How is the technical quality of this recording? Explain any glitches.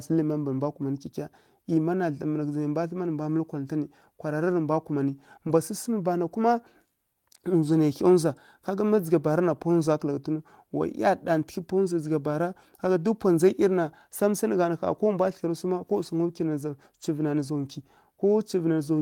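There is one brief glitch in this speech recording. From 9.99 to 10.01 s, a lost packet was rebuilt from error correction. About 20 ms, likely one packet, was replaced by a low-bitrate backup copy, so there's no gap, just a short rough, noisy patch.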